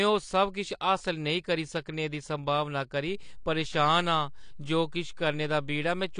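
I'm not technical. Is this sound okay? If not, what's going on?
No. AAC compression, likely the cause, dulls the speech for the whole clip: nothing is left above 9.8 kHz, so it sounds muffled. The encoder squeezes the sound to save space, discarding detail it judges unimportant, which leaves a smeared, fizzy texture.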